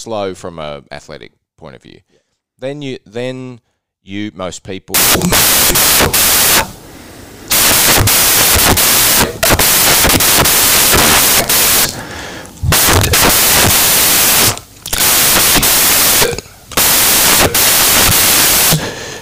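From 4.94 s to the end, the speech collapses into loud, harsh broadband noise: samples built from the wrong bytes. Misassembled bytes make low-order bits dominate each value.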